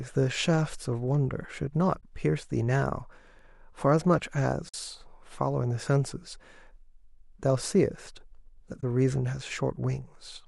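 Short runs of AAC frame loss with muting interrupt the speech at 2.01 to 2.03 s, 4.69 to 4.74 s and 8.81 to 8.83 s. The decoder zeroed the missing frames, and the overlapping windows fade the sound out and back in, leaving soft-edged holes. The first and last gaps fit two lost 10 ms frames, and the middle, longer dropout fits five. The short frames likely come from a low-delay AAC link, whose coding damage is light.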